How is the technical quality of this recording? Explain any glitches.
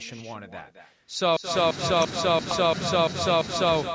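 The recording has two clear faults: an echo of the speech that runs through the whole clip, and a section where the audio freezes into a repeating loop.

From start to finish, the speech is shadowed by an echo with no canceller. The far end's loudspeaker was picked up by its own microphone and sent back, so every phrase returns roughly a fifth of a second later, about 9 dB quieter. Unlike ordinary room reverberation, it is a distinct, delayed copy rather than a smooth tail, and it sounds thin because it passed through a second microphone.

From 1.37 to 3.76 s, a system hang loop takes over. The machine or driver stalled while the audio hardware kept replaying its ring buffer, so one 341 ms fragment repeats seven times at about 2.93 per second, which fits a 16384-sample buffer. The loop is exact and identical on every pass, unlike packet-loss concealment, which smears or fades its repeats. 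That produces a mechanical stutter rather than dropouts, and the frequency content still stops at 8 kHz, as the call's microphone processing would allow.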